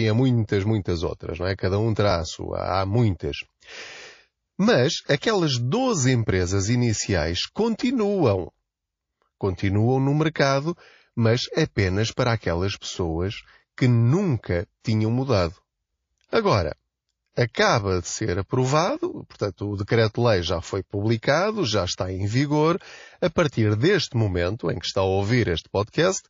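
Throughout the speech, the sound is watery and swirly, with dulled treble and chirpy s sounds. This is likely MP3 compression, fitting a low bitrate near 32 kbps.

Pre-echo occurs at 5.06, 14.80 (after "aquelas pessoas que nunca"), 16.28 and 17.32 s (before "acaba de ser aprovado"). Hiss rises about 15 to 24 dB, 34 to 49 ms before each attack. The encoder apparently never switched to short blocks, so the noise spread across a long window of roughly 72 ms and the attacks sound smeared.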